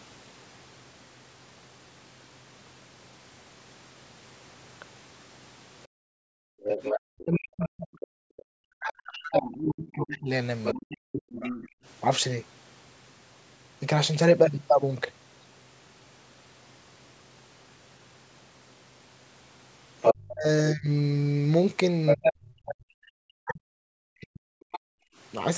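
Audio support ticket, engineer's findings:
Room background ducks hard and briefly, 5.87–6.26 s, about 40 dB down for roughly 0.4 s, then returns. Background gated by the echo canceller: it clamped the mic while the far-end loudspeaker played.

Near-end speech dips deeply, 6.54–11.57 s (about 4 s affected) and 20.11–24.87 s (about 3 s), drops near 40 dB. Speech suppressed in double talk, likely the echo canceller muting both talkers at once.

Second voice audible under the talker at 6.83–8.02, 9.68–11.68, 20.02–20.13, 22.06–22.73 and 24.61–24.79 s. It sits somewhat below the talker in the first two, as loud as them at 20.02 s and 22.06 s, and faint at 24.61 s. Other side's voice leaking through, likely residual echo the canceller missed. Band-limited to 8 kHz by the call mic chain.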